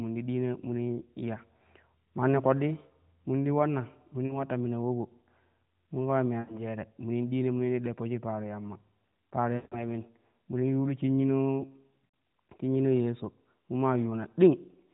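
Speech over a narrowband mobile link, with four brief dropouts where the sound stretches and sags before recovering roughly. They fall at 4.26 to 4.39 s, just before "ta mina ulobo"; 6.40 to 6.59 s, between "mun kama me" and "jere munin ɗiina"; 9.56 to 9.84 s, after "shik paro yamma para", where it fades almost to silence; and at 12.07 s. These are lost AMR speech frames: the decoder extended the last good frame with falling gain, hiding roughly 40, 80, 160 and 80 ms of missing audio.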